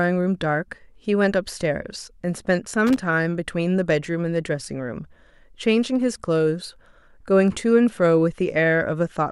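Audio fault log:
2.87 to 3.02 s, loose connector crackle: for about 0.15 s the speech is broken by an irregular burst of scratchy crackle. A worn or dirty contact is making and losing connection in quick succession, chopping the signal on and off, and any DC on the line turns each make or break into a pop. The ragged, uneven spacing and scraping texture mark it as a physical contact fault rather than a clean, evenly timed digital click or dropout.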